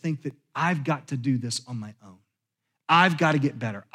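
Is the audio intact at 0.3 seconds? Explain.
No. At 0.31 s, just before "I've got to do", there is a block of digital silence: about 0.67 ms of samples zeroed, which fits a 32-sample gap. The hard edges yield a tick or dip, too brief to hear as a hole, unlike a faded dropout.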